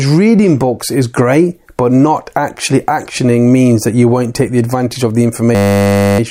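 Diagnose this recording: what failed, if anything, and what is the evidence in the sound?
System hang loop, 5.55 to 6.19 s, right after "the advantage of the": a fault at the driver or buffer stage. A 10 ms slice repeats 64 times, heard as a steady 100 Hz buzz, because the system froze while the hardware kept replaying the same ring buffer, which points to a buffer of about 10 ms.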